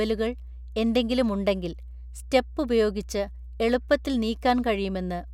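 Mains hum runs through the entire speech clip as a steady 60 Hz tone with low harmonics, sitting roughly 15 dB below the speech. A ground loop or nearby transformer has coupled the power line into the signal path, so the buzz never lets up.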